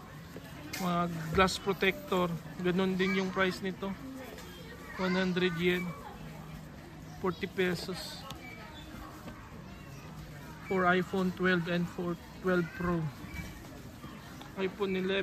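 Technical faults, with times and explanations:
No technical faults can be heard anywhere in the signal.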